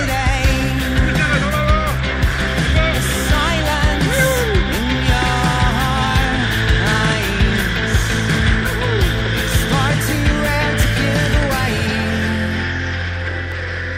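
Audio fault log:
No faults detected anywhere in the audio.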